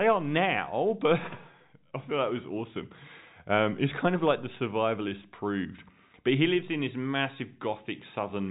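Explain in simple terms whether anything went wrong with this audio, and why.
Nothing went wrong that I could hear: the speech comes through as an ordinary telephone-quality recording, and nothing stood out on listening.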